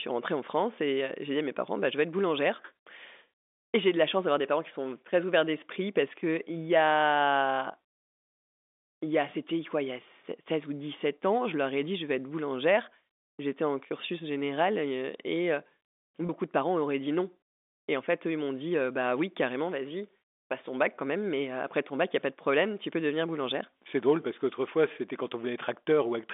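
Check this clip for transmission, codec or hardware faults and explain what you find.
One fault is audible. At 16.27 to 16.29 s the sound briefly holds with a slight buzz. This is packet loss with pitch repetition: about 20 ms of audio went missing, consistent with two dropped packets, and the receiver filled the gap by repeating the last pitch period.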